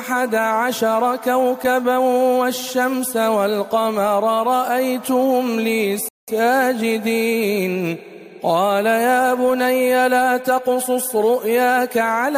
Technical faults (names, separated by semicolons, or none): rebuffering stall